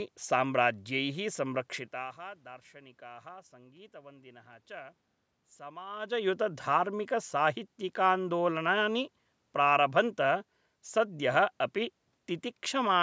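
No technical faults are present.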